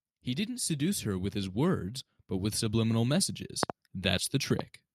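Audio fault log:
0.34–3.37 s, automatic gain rising: the gain control decided the input was too quiet and eased its gain up by about 6 dB over roughly three seconds, so the speech and the background swell together rather than the talker actually getting louder.
3.63–3.72 s and 4.59–4.62 s, loud pop: a double pop peaking around 20 dB above the speech, then a single smaller one about 10 dB up. Each is a sharp voltage spike riding on top while the speech carries on underneath, likely from a plug, switch, static or driver glitch.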